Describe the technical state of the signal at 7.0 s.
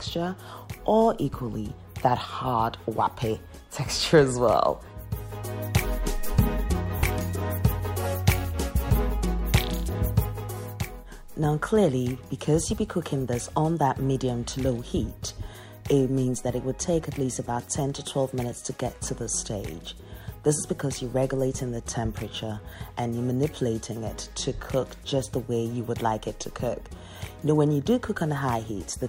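At 7.0 s the signal is in a stretch of lost LE Audio frames, running from about 6.99 to 7.03 s. That 40 ms gap fits four 10 ms LC3 frames. The decoder fills it by repeating the last received spectrum with randomised signs, so tonal content blurs into a brief noisy smear. On a spectrogram, sharp harmonic lines give way to diffuse, grainy energy over the same band. The waveform shows an irregular, noise-like texture instead of a clean periodic shape.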